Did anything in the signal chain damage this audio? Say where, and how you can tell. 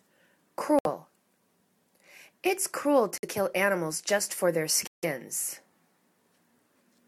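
Yes. The sound drops to silence three times: 0.79 to 0.86 s, 3.18 to 3.25 s, and 4.87 to 5.05 s. The gaps are short, about 64 ms, 53 ms and 156 ms. Each cut is abrupt, and the audio picks up again afterwards. This is most likely a Bluetooth stall at the wireless playback link. Interference delayed packets, the headphones' buffer emptied, and output paused until the resent data arrived.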